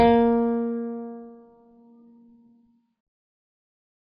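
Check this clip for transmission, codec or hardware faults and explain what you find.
The music carries one fault, heavy codec damage across the whole clip.

AAC compression, throughout: the sound is likely to have passed through an AAC-LC encoder at a very low bitrate, around 16 kbps. With so few bits per frame, the encoder removed everything above 5 kHz and quantised the remaining frequency lines coarsely. The music sounds dull and smeared, and sustained tones take on a warbling, fizzy texture.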